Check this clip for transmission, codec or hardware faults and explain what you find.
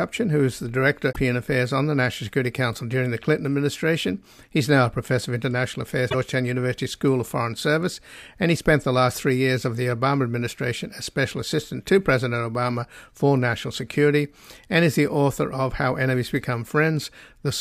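The clip has damaged data in a compressed stream, heard three times: 1.09 to 1.17 s, just after "who is the"; 6.08 to 6.15 s; and at 8.80 s, between "and he spent" and "the last three years". Corrupted bytes make the decoder misread frames, lose sync and hunt for the next frame header, so each spot comes out as a brief chirp, squawk, click or short hole in the speech.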